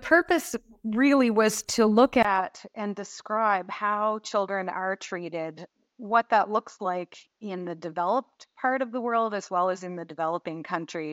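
A speech clip. At 2.23 s, right after "really was to look", the sound drops out for 20 ms. It returns duller and about 5 dB quieter, with nothing above 7.6 kHz and a faint new noise floor. The input likely switched to a poorer device. This holds to the end.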